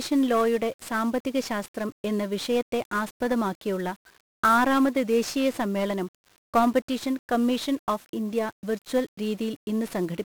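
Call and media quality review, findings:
1-bit DFPWM compression across the whole speech clip. Encoder stores one bit a sample to push an adaptive level up or down, consistent with a 48 kbps stream. Heavy broadband quantisation noise: fuzzy, crackly speech, treble buried under hiss.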